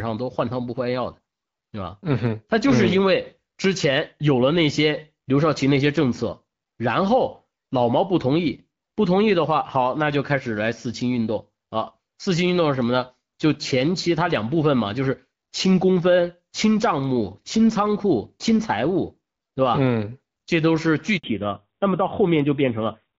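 At 21.18 s the speech cuts out for 60 ms, until 21.24 s. This is a handover gap. The call was passed from one network link to another, and no speech frames came through during the switch. The sound fades away within a few tens of milliseconds and then there is dead silence. Whatever was said in that slice is gone for good. The listener hears a short, clean hole rather than noise or a click.

From 21.24 s to the end, the speech loses its upper range. This is a fallback to narrowband. Before the gap, the speech has the fuller wideband sound of HD Voice, which fits AMR-WB at 12.65 kbit/s. After it, nothing is left above 4 kHz. The call has dropped to an older narrowband codec, and the sound fits AMR-NB at 7.4 kbit/s. The speech turns duller, muffled and rougher.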